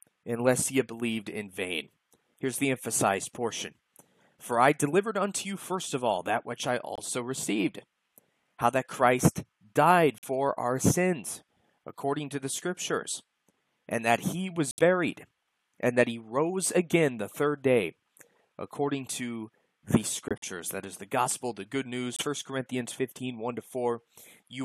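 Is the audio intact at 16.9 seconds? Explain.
Yes, the audio is intact at 16.9 seconds, with no fault audible at that moment.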